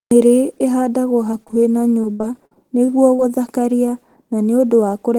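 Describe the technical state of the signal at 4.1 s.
At 4.1 s the speech signal is intact, with no audible technical fault at that moment.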